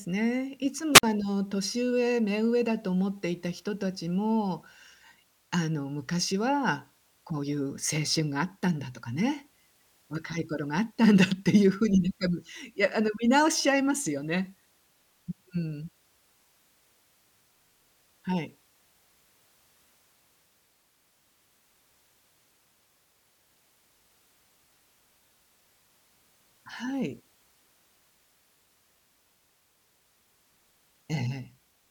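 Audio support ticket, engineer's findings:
Wireless microphone squelch dropout, 0.94–1.03 s. Hiss swells, then a 51 ms hole of near silence. RF fade at the FM receiver; squelch muted the output.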